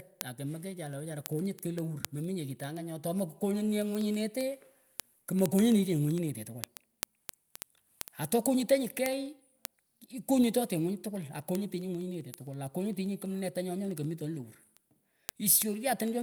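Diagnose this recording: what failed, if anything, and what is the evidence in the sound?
Word clock ticks run through the whole speech clip, from 0.15 s to 16.21 s: sharp clicks of uneven strength at a steady rate of roughly one every 0.07 s, around 300 in all. The failure is at the digital interface into the converter. The receiver runs on its own clock, not locked to the sender's, and the two differ by a few hundred ppm. At each slip a single sample is dropped or repeated, producing a tick.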